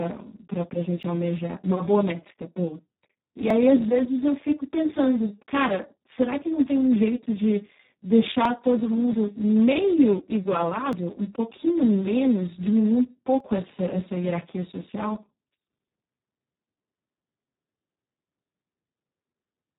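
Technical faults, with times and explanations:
Throughout, Speex codec: the speech sounds hoarse, noisy and partly robotic, with nothing above 3.8 kHz. At about 4 kbps the CELP coder has very few bits for the excitation signal, so it models the voice only coarsely and the result approaches vocoder-like synthesis.
1.03, 3.50, 8.45, 10.93 and 13.40 s, audio missing between chunks: brief skips where a short piece, roughly 30 ms, vanishes and the two sides butt together without silence. The spacing falls on multiples of 2.5 s, likely from a chunked recorder or processor dropping samples at each chunk boundary.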